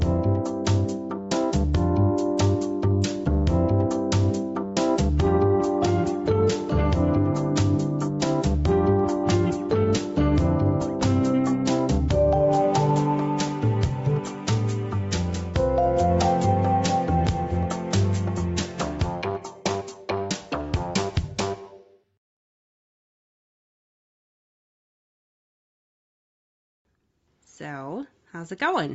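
Gain pumping runs through the whole clip. The gain swings by about 5 dB, squashing loud and soft passages together. The likely cause is input gain set far too high, with a fast limiter clamping each peak.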